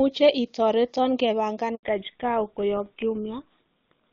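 At 1.75 s the audio just drops out for about 80 ms, until 1.83 s. That's a handover gap: the call got passed from one network link to another, and no speech frames made it through while the switch happened. You hear the sound fade out over a few tens of milliseconds, then dead silence until the new link picks up. Whatever was said in that window is simply gone.

Right after the gap, from 1.83 s to the end, the audio loses all its top end. Nothing gets above 4 kHz. That's a fallback to narrowband: the new link couldn't keep HD Voice going and dropped to an older narrowband codec, which sounds consistent with something like GSM full rate. Compared with the wideband stretch before 1.75 s, which has the clear, open quality of AMR-WB at a high rate, the rest sounds dull, boxed-in and a bit rough.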